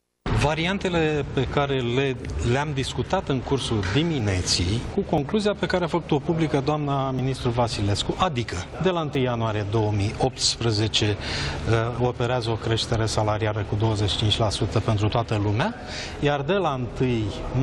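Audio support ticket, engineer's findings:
Short skips at 3.22, 4.20, 5.18, 7.19, 8.17, 9.15, 14.13 s. Overlap between stream segments: 1 s segment boundaries trimmed, 6–13 ms lost, waveform jumps.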